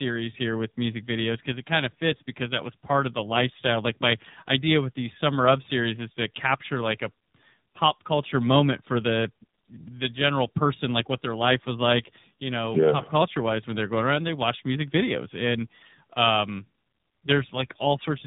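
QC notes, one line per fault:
Throughout: tandem speech coding. The speech has passed through two low-rate speech coders in succession, consistent with an iLBC leg followed by an AMR-NB leg at around 10 kbit/s. The second coder re-encodes the first coder's already degraded output, so the errors compound. The result is rough, muffled and warbly. A spectrogram shows nothing above 3.8 kHz, with smeared, unsteady formant bands. The waveform looks coarser than the original would.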